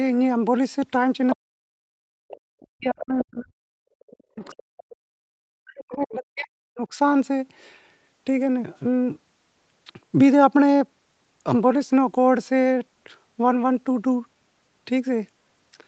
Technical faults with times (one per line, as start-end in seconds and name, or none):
1.30-1.36 other side's voice leaking through
1.36-1.84 speech suppressed in double talk
2.12-2.28 background gated by the echo canceller
2.28-2.64 other side's voice leaking through
2.59-6.88 speech suppressed in double talk
2.99-3.24 other side's voice leaking through
4.44-4.83 other side's voice leaking through